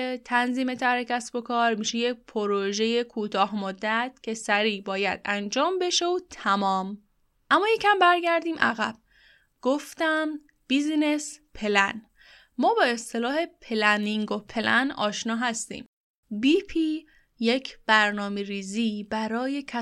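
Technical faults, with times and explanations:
Nothing stood out on listening to this speech recording.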